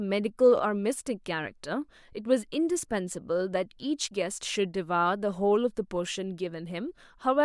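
No technical faults can be heard anywhere in it.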